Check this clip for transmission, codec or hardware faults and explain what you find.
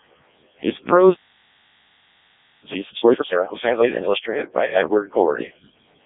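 Two faults are present: Codec 2 vocoder coding throughout, and a time-compressed catch-up in the middle of the clip.

Codec 2 vocoder, whole clip: the speech was reduced to pitch, voicing, energy and a coarse spectral envelope, then rebuilt from sine waves, so the original waveform is gone. The damage is heavy, which fits the lowest 0.7 kbit/s mode. The voice sounds robotic and buzzy, confined to 200 Hz to 3.7 kHz with nothing above.

Time-compressed catch-up, 2.65 to 4.15 s: after a stall, the player cleared its backlog by cutting out small pieces of audio and cross-fading across the gaps, playing at 2.0 times normal speed. The speech rushes by at normal pitch.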